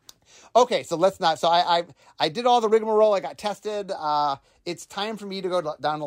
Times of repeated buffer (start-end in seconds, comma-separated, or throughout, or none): none